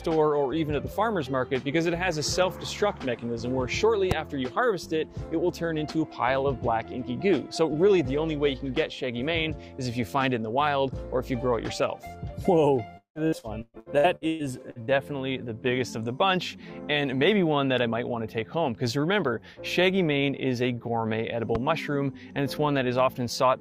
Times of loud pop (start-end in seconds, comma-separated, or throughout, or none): 4.11-4.14, 21.55-21.58